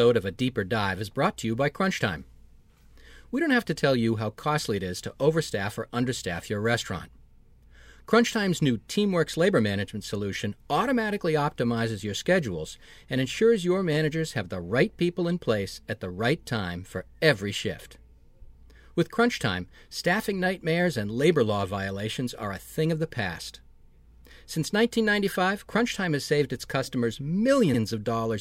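Near the end, at 27.73 to 27.78 s, a short run of compressed data was delivered twice, a case of repeated frames that fits a pair of codec frames. The decoder plays that 52 ms stretch of speech once more, producing a brief stutter, and the clip grows by 52 ms.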